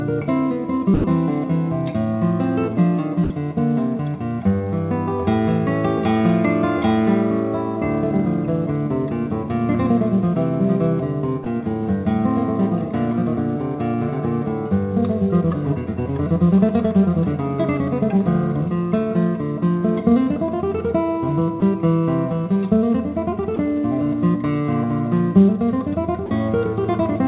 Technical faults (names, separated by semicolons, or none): sound dropped by the voice detector